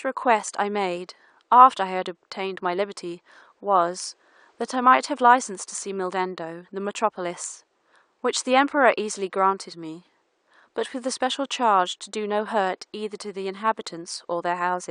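No technical faults can be heard anywhere in the recording. The only background sound is the room noise picked up by the microphone, sitting about 47 dB below the speech.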